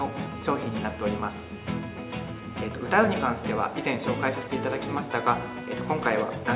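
No technical faults can be heard in the signal, which shows the narrow band of an ordinary call path with nothing above 4 kHz, as fits G.711 mu-law coding at 64 kbps.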